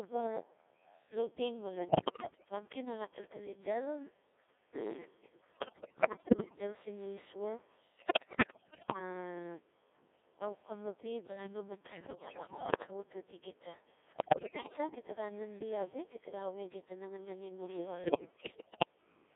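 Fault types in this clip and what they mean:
Codec 2 vocoder: The whole speech clip has passed through a very low-rate digital-radio vocoder at 1.6 kbit/s. Only pitch, voicing, energy and a coarse spectral envelope survive, and the decoder rebuilds the voice from sine waves, so the damage is heavy: a steady robotic, buzzy quality held within a 300 Hz to 3.6 kHz band. Unlike ordinary lossy-codec smearing, nothing of the original waveform texture remains, and the artificiality stays constant from start to end.
Bit errors on digital voice radio: Six bursts where corrupted bits reach that vocoder and wreck whole frames, at 1.88–2.44 s, 5.52–6.58 s, 7.96–8.99 s (just after "del sin no isua"), 11.92–12.91 s (just before "awatwati gita"), 14.12–14.78 s (just after "awatwati gita") and 18.04–18.85 s. Pitch, level and tone colour jump frame to frame into bleeps, warbles and gibberish, with roughly one bit in five to ten wrong. 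This differs from the steady codec buzz by being sudden, erratic and confined to these stretches.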